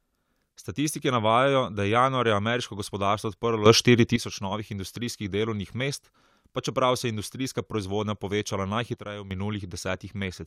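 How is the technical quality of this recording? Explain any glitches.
The speech is marred by two sudden gain jumps. From 3.66 to 4.16 s the level leaps up about 11 dB, and from 8.95 to 9.31 s it drops about 9 dB, each likely a gain setting applied instantly without a ramp. The background noise steps together with the speech and the change happens instantly, which separates this from a fade or compressor pumping.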